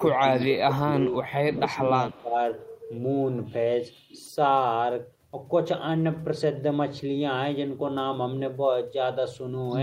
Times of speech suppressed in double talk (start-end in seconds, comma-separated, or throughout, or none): 0.00-2.36